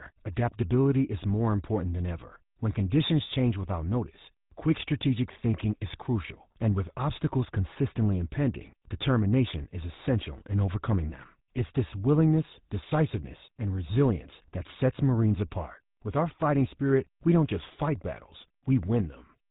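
Throughout, GSM full-rate codec damage gives a buzzy, gravelly roughness; the spectrogram shows nothing above 3.8 kHz, consistent with a roughly 13 kbps pulse-excited coder.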